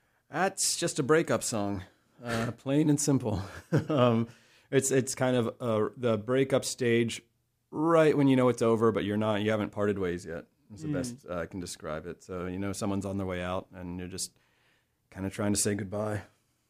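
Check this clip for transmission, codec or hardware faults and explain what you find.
Nothing faulty is audible anywhere in this speech.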